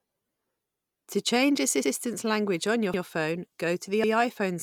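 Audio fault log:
0.74–0.84, 1.84–1.94, 2.94–3.04 and 4.04–4.14 s: overlapping chunks. The speech was handled in 1.0 s blocks, and each new block begins 100 ms before the previous one finished, so the same 100 ms of audio is played twice at every join. The joins fall 1.1 s apart, giving a regular stutter or click where the repeated stretch butts against the earlier copy.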